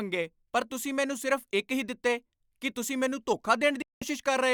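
A speech recording with a digital broadcast dropout near the end: at 3.82 s the audio fades out over just a few milliseconds and stays silent until about 4.02 s, a hole of roughly 190 ms. That's the receiver losing the signal, or getting frames that failed their checks, and muting until clean data came back. The gap's length fits about six lost frames of around 32 ms each, and whatever was said during it is simply gone.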